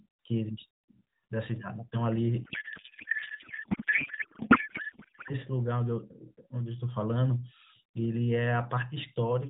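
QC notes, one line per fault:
2.44–5.33 s, codec payload misread: the speech turns into garbled warble that barely tracks it. This fits octet-aligned AMR frames being unpacked as bandwidth-efficient, putting every field in the wrong place. On a spectrogram, harmonics dissolve into smeared energy below 4 kHz; the waveform envelope stops following syllables.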